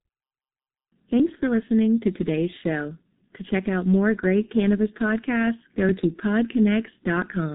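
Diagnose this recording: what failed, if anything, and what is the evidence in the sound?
Codec stage: the speech is heavily mangled by the G.723.1 codec throughout, muffled and hoarse with smeared consonants, nothing above 3.8 kHz, which fits its 6.3 kbit/s mode.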